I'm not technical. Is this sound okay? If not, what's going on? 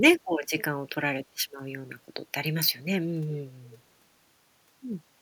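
No. There is an echo leak at 3.32 to 3.41 seconds and again at 3.63 to 3.79 seconds: a faint, delayed copy of the speech comes back in two short scraps, about 0.39 seconds behind the original. It sounds like a quiet ghost of the talker trailing just behind. The likely cause is one side of the call using a loudspeaker, with its echo canceller failing to remove all of what its microphone picked up, so some was sent back.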